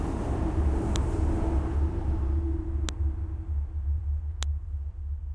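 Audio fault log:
0.96 s, 2.89 s, 4.43 s: file header played as audio. A sharp, loud click marks each join, where the header bytes of another WAV piece were read as samples. On the waveform each is a single spike; on the spectrogram, a thin vertical line across all frequencies.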